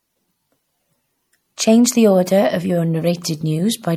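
Speech throughout shows MP3 compression, likely from a low-bitrate encode around 64 kbps, leaving plainly audible watery, swirly artefacts and smeared consonant attacks.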